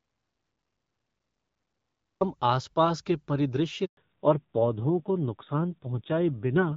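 Right from the start there's nothing at all. The clip opens in an audio dropout to silence that's already under way and lasts until 2.21 s. It's plain silence, with no room tone or hiss. It sounds like the input was lost somewhere upstream, likely a disconnected device or a stray mute, while the recorder kept writing empty samples. Whatever came before 2.21 s simply isn't there.

The speech then comes in on what sounds like an HD Voice (AMR-WB) link, clear with only light codec colouring. At 3.85 s you get a handover gap. The voice dies away within a few tens of milliseconds and stays silent for 120 ms, until 3.97 s. That's the call being passed from one network to another, with no speech frames arriving while the new link comes up. What was said in that slice is gone.

From 3.97 s to the end there's a fallback to narrowband. After the handover, the call lands on an older narrowband codec, which fits a drop from AMR-WB at around 12.65 kbit/s to AMR-NB at around 7.4 kbit/s. 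Nothing above 4 kHz survives, so the sibilants and air are cut off and the voice sounds duller, boxier and a bit rougher than it did a second earlier.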